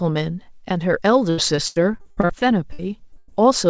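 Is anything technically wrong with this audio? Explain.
Yes. From 1.30 to 3.30 s the speech turns choppy and robotic, with pieces missing. This is repeated packet loss: holes of up to 100 ms, about 29% of the stretch, are patched by stretching the preceding sound. The call path itself shows nothing above 8 kHz, which fits a wideband codec such as G.722.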